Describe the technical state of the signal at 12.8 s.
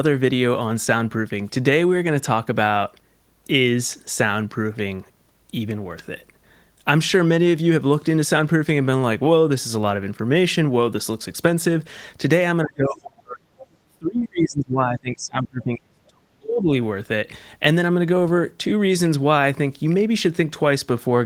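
At 12.8 s the speech sits inside a dip from 12.64 to 13.42 s, sinking roughly 35 dB, most likely speech suppressed in double talk by an echo canceller.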